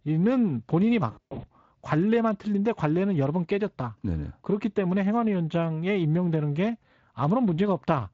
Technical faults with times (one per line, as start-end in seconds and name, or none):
1.11-1.49 VoIP packet loss concealed by the speech codec